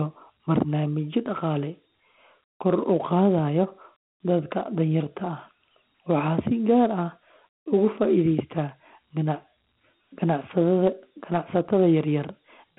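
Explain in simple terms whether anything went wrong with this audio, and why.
Something did go wrong. The speech carries Dialogic VOX ADPCM damage from start to finish. This old phone-system format stores each sample as a rough small step. That leaves a gritty hiss following the voice. Nothing survives above about 3.9 kHz, so the sound is thin and muffled.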